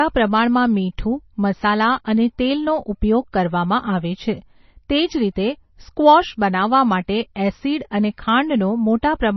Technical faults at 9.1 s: MP3 compression

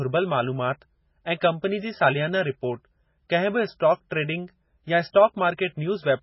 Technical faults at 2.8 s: MP3 compression

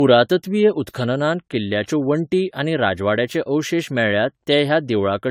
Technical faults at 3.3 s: generation loss

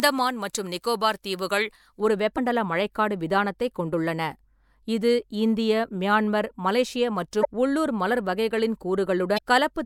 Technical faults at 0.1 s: pre-emphasis left on

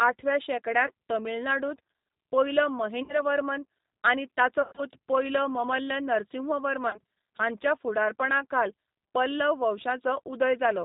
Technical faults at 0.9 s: G.729 codec; VoIP packet loss concealed by the speech codec

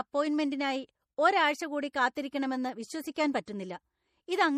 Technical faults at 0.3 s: MP3 compression

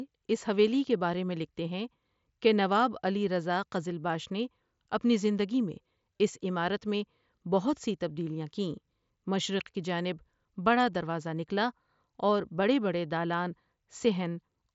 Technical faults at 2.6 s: none

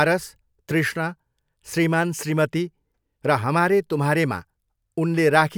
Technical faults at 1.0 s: none

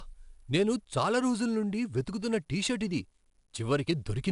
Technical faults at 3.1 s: 4-bit ADPCM compression

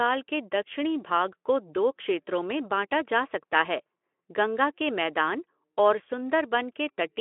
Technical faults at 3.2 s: none

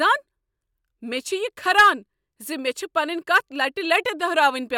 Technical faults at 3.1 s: none

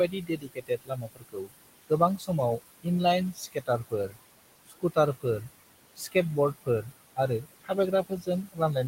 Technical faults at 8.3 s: noise suppressor artifacts; speech cut by the noise suppressor

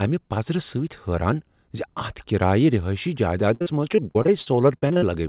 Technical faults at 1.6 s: none

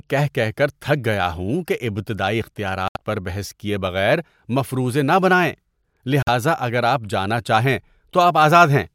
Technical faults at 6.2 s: corrupt frame muted

